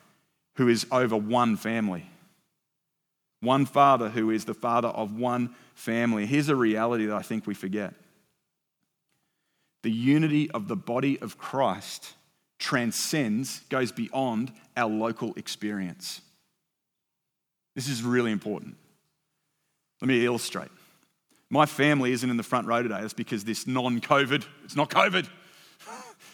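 At 3.84 s, just before "who is the", the speech and background drop about 1 dB in one step, likely a microphone volume stepped down by the call software's input control.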